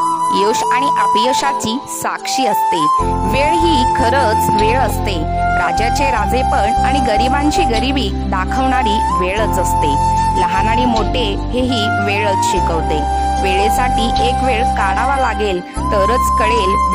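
No technical faults can be heard anywhere in the audio.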